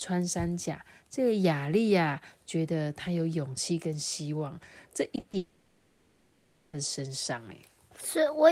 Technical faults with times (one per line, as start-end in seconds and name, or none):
5.15-5.35 short concealed packet loss
5.37-6.75 long network dropout